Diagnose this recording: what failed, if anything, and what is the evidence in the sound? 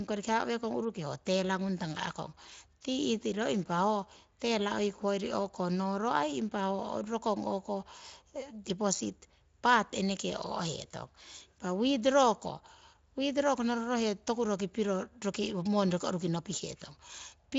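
Nothing in the recording has failed: the speech carries the mild texture of a Speex link at a fairly generous setting, with no content above about 7.5 kHz.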